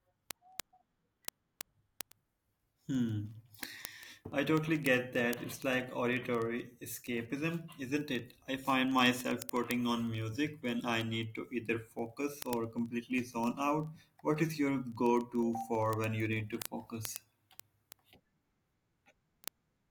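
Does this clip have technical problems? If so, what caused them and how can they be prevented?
Yes. Word clock ticks run from 0.13 s to the end: sharp clicks roughly every 40 ms, hundreds in all. An unlocked receiver drifts several hundred ppm from the sender and slips one sample each time. A spectrogram shows evenly spaced thin vertical lines, and the waveform shows single-sample glitches. To prevent it, lock the receiving device to the incoming digital signal or to a shared word clock.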